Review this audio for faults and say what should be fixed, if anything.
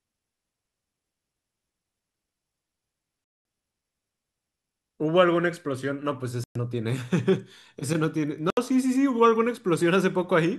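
The speech cuts to silence three times, at 3.24 to 3.45 s (about 209 ms), 6.44 to 6.56 s (about 116 ms) and 8.50 to 8.57 s (about 70 ms). Each time it returns further along, as though it kept playing unheard. That points to a likely Bluetooth dropout, where packets miss the headphones and the output mutes. A simple edit or a stall would resume where it stopped. Keep the headphones close, with a clear line of sight, and away from 2.4 GHz traffic.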